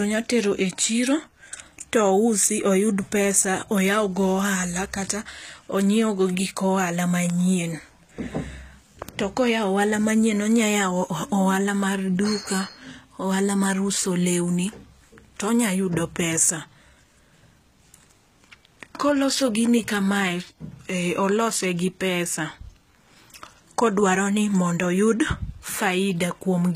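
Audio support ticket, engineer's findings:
Gritty, lispy s sounds and synthetic-sounding treble throughout, nothing above 14.9 kHz; likely HE-AAC compression, treble rebuilt by band replication, which fits a bitrate around 20 kbps.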